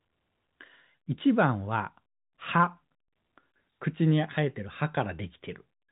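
Speech over G.711 telephone coding, with nothing above about 3.8 kHz as that narrowband path dictates, and no technical fault present.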